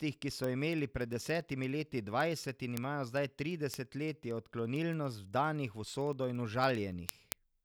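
From 0.10 s to 7.60 s, word clock ticks recur about every 50 ms, some 150 in all. An unlocked receiving clock, off by a few hundred ppm, slips one sample per collision, giving sharp uneven clicks: thin evenly spaced vertical lines on a spectrogram, short few-sample glitches in the waveform.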